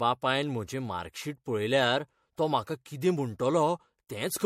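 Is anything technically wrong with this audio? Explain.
Yes. Throughout, the speech has generation loss. It sounds swirly, hollow and smeared, and consonant attacks blur. Nothing reaches above 16.5 kHz. This likely comes from repeated MP3 re-encoding, around three passes, which fits 64 kbit/s. Each pass requantises on a shifted frame grid, so noise and spectral holes build up.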